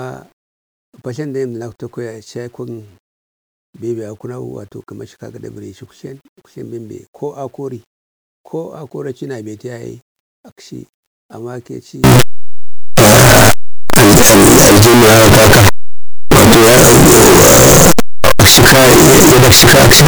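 From 12.04 s, after "a makechi", 8-bit samples were likely read with signed and unsigned mixed up, so zero crossings jump full-scale: harsh, uniformly loud distortion to the end.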